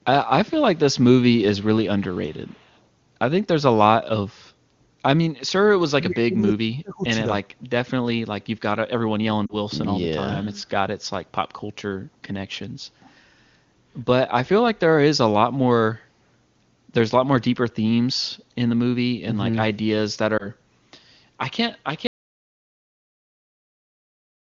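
From 1.99 to 2.80 s a very faint, delayed copy of the speech trails behind it, about 271 ms late: an echo leak, likely from a loudspeaker whose echo canceller let some pickup through.

Between 5.9 and 7.06 s the speech sinks deeply and breaks up for about a second in total. This is speech suppressed in double talk, likely because the canceller turned down both sides while they overlapped.

At 7.45 to 7.63 s the room background dips by about 14 dB for roughly a fifth of a second and then returns. The background was gated by the echo canceller, which clamped the microphone while the loudspeaker played.

Around 9.46 to 9.55 s a short fade toward near silence in the speech points to lost AMR speech frames. The gap fits two missing 20 ms frames that the AMR-WB decoder bridged with fading repeats.

A briefer version of the same glitch, fitting a single lost frame, occurs at 20.37 to 20.49 s.

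From 22.07 s to the end the audio cuts off into total silence with no room tone. This is an audio dropout to silence, likely because the input was lost and silence was written.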